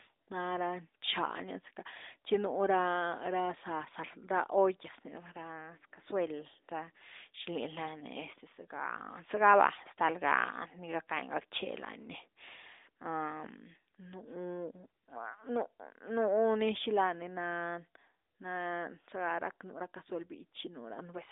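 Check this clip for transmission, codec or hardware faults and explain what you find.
I find no transmission, codec or hardware faults in this clip.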